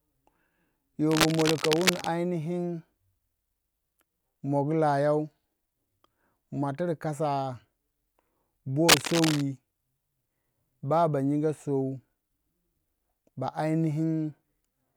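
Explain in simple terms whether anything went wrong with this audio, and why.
Cable scratch noise, a rough scratching as loud as the speech, appears from 1.10 to 2.07 s and 8.88 to 9.42 s, likely from a worn, moved cable or connector.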